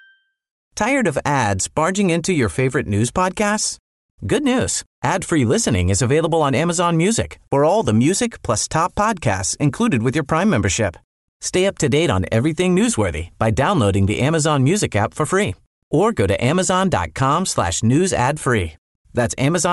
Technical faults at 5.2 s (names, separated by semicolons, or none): Bluetooth LC3 compression